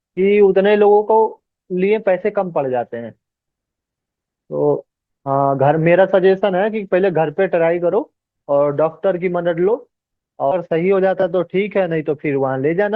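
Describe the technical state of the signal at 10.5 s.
At 10.51 to 10.55 s the speech jumps abruptly forward, with a small blip at the join, so the flow breaks and picks up again further along rather than continuing where it left off. This points to a stream segment skipped: one chunk of the segmented stream likely failed to arrive or load in time, and the player moved on to the next segment instead of waiting, leaving that portion of the programme missing.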